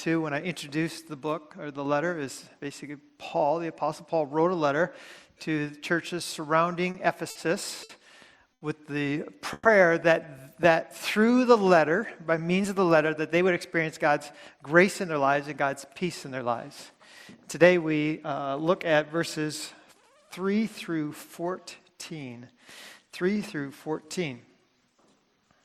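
Around 6.91 s the sound starts catching on itself, and it happens four times in quick succession: at 6.91, 7.30, 7.83 and 8.53 s. Each is a short stall from a late packet. The jitter buffer ran dry, so the receiver held the last bit of sound until the packet turned up, then carried on where it left off. The holds get longer each time, 30, 50, 60 and then 80 ms, and you hear a brief smear with a faint buzz.

At 9.53 s there's a bigger one, lasting to 9.68 s, a call audio freeze. The last sound is stretched for about 120 ms, turns buzzy, and fades to a sliver of silence of roughly 10 ms before the audio resumes. Nothing is skipped, just a gap inserted. The likely cause is packets held up in transit long enough that the buffer emptied completely.

From 10.72 to 11.32 s the jitter buffer slow-down kicks in. The receiver was building back its reserve by repeating tiny pitch-period chunks, adding 42 ms over that stretch. 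Playback runs at 95% speed with the pitch unchanged, so things sound slightly drawn out, maybe with a hint of warble.

Then, from 13.15 to 17.72 s, it swings the other way: a jitter buffer speed-up. The buffer was holding too much, so the receiver trimmed out short pitch-period slices, about a fifth of a second in total. That's 104% speed at the same pitch.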